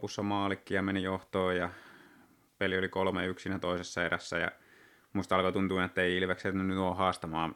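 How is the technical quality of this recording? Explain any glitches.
No glitches turn up anywhere in this speech recording, so there are none to explain.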